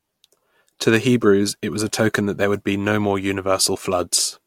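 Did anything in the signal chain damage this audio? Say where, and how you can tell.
No, nothing in the chain from capture through playback left an audible mark on this speech.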